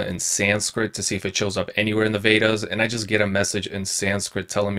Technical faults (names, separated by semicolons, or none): overlap-add ripple